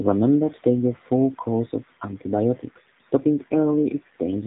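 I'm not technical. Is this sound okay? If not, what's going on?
No. The whole clip has been through an AMR narrowband mobile codec, the compression used on older phone calls. Nothing above about 3.8 kHz survives, so the speech sounds muffled and boxy, and the low data rate adds a plainly audible buzzy, synthetic edge.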